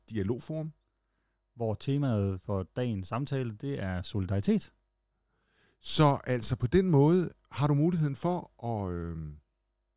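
No technical faults can be heard at any point in this speech recording.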